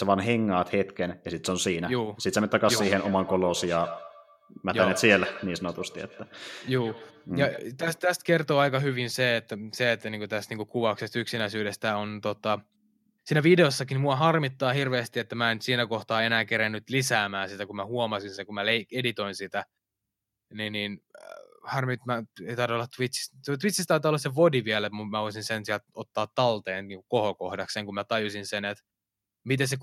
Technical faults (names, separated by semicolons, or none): feedback echo between two devices